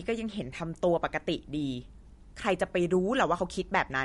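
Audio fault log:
throughout: MP3 compression, likely. The speech sounds watery and swirly, with chirpy sibilants and smeared onsets. Nothing lies above 11.2 kHz, which fits a low bitrate near 48 kbps. A spectrogram shows a flat ceiling at 11.2 kHz and patchy holes flickering frame to frame.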